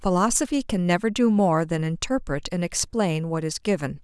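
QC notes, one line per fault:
No faults found in this speech clip. Nothing here needs a fix.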